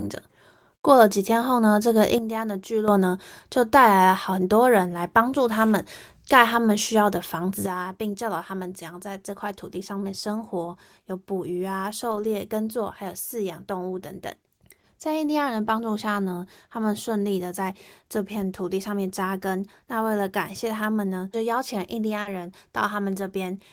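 A speech recording whose digital gain was likely switched without a ramp, so from 2.18 to 2.88 s and again from 7.66 s to the end, voice and background fall together by about 9 dB in an abrupt sudden gain jump. Lost packets were rebuilt from error correction, with the decoder playing low-bitrate copies carried in later packets. Around 12.11 to 12.25 s, about 80 ms of sound turns rougher and noisier without any gap, which fits several separate lost packets. A shorter rebuilt stretch of about 20 ms sits at 22.25 to 22.27 s. Short concealed packet loss, where the receiver extended the last sound to cover audio that arrived too late, causes a brief smear around 14.81 to 14.85 s (about 20 ms filled). A longer one at 22.21 to 22.27 s covers about 40 ms and overlaps the rebuilt frame there.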